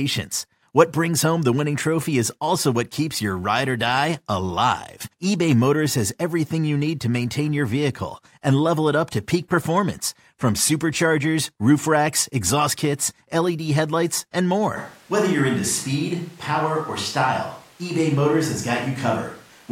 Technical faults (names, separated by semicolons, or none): switch to a distant microphone